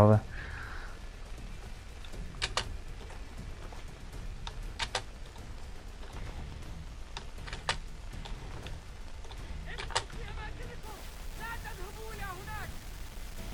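From 10.83 s to the end at 13.53 s, the audio turns grainy, with error riding along with the signal roughly 20 dB down. The likely cause is low bit depth without dither, consistent with plain rounding to about 7 bits.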